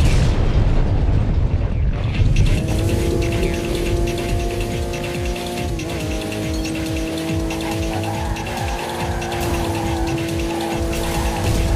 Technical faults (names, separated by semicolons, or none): none